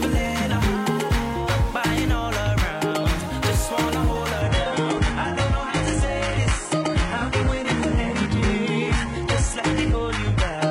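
At 4.41 s the stream drops to a lower bitrate and stays there to the end. There's no gap, just a sudden step down in quality: nothing above 11 kHz survives, and the top end turns thin, with more codec smearing. That sounds like the player switched to a much leaner rendition because the connection slowed, which fits a jump from a full-rate AAC stream to a low-rate HE-AAC one.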